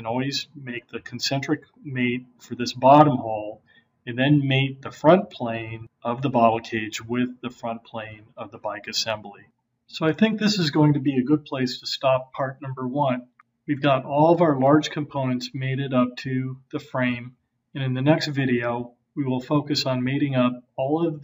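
Nothing stood out on listening to this recording.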